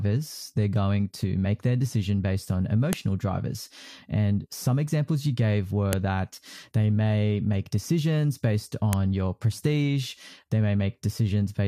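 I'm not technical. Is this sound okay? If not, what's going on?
No. There are three sharp, loud clicks, at about 2.93, 5.93 and 8.93 seconds, each a short snap. This is a file header played as audio. The recording was put together from separate pieces about 3 seconds long, and each piece began with a small block of file information that was meant to be skipped. Instead, it was played as if it were sound, producing a click wherever a new piece starts.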